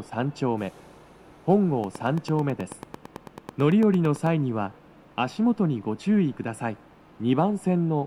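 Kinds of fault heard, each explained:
Train of clicks, 1.84 to 4.27 s: about twenty near-identical pulses arrive at a steady 9.1 per second, ticking over the sound and peaking a few dB above it, likely from interference by nearby equipment or a faulty connection or power supply injecting repeated spikes.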